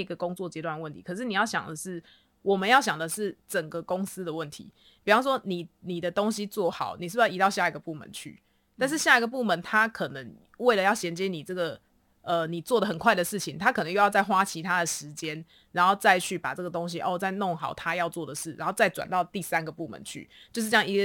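Crude rate conversion runs from 2.58 s to the end. Samples were simply dropped to the nearest point, with no filtering, which fits a change from 48 kHz to 44.1 kHz. This leaves an inharmonic, gritty fizz around 25 dB below the speech, strongest on loud and high sounds.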